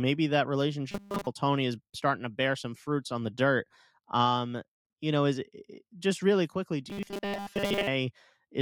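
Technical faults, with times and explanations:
0.91 to 1.27 s and 6.90 to 7.87 s (the second just after "just really quickly do"), robotic sound from repeated short buffers: the speech turns into a rigid, metallic buzz fixed at 200 Hz, with the words still roughly traceable underneath. The likely cause is audio arriving too seldom, so the software loops the last 5 ms of sound to fill the gaps. Most of each stretch is these repeats, and that 5 ms loop imposes the steady 200 Hz pitch.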